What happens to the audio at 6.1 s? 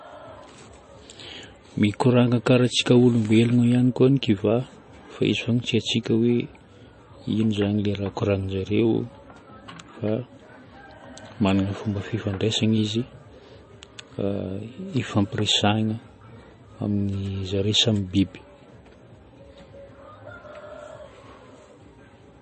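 Likely MP3 compression, present throughout: the encoder drops everything above 8.3 kHz and flickers weak components, so at 6.1 s the speech sounds dull and watery.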